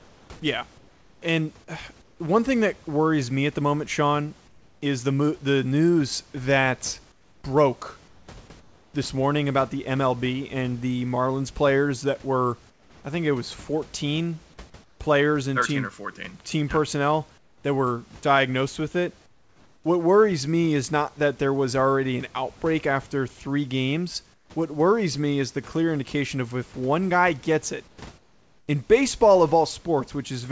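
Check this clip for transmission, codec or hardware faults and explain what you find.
Yes, there is one recurring fault in this speech clip: comfort noise in place of the background. The sound also has nothing above 8 kHz, which fits a G.722 call codec at 64 kbps.

Comfort noise in place of the background occurs at 0.0–2.2 s (ending before "one thing that worries"), 4.48–4.82 s (before "is the"), 7.12–8.94 s, 12.7–15.0 s, 17.38–19.84 s, 24.34–24.5 s, and 27.88–28.68 s (between "one guy gets it" and "in baseball of"). In these pauses the room's textured background turns into a flat, featureless hiss, dropping about 5 dB at 4.48 s and about 9 dB at 24.34 s. The likely cause is discontinuous transmission: the sender stopped sending during silence, and the receiver filled the gaps with synthetic noise.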